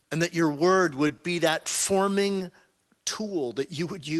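Just after "and that your word", short concealed packet loss at 1.07 s replaces about 20 ms of missing speech with continued sound, a brief smear where audio is actually lost. The same smear recurs at 1.63, 1.82, 2.38 and 3.04 s.

At 1.17 s, a short stall from a late packet leaves the jitter buffer briefly empty. The last sound is held about 20 ms too long with a slight buzz or dip. Unlike the losses, no speech is missing, only delayed.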